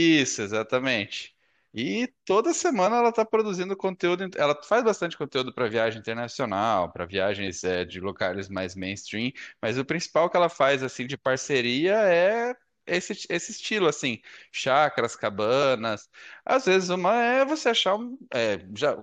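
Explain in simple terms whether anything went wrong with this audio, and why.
Damaged data in a compressed stream causes brief chirps or blips at 0.36–0.38, 2.86, 7.47, 11.35 and 15.62 seconds, where the decoder misreads corrupted bytes and briefly loses its place.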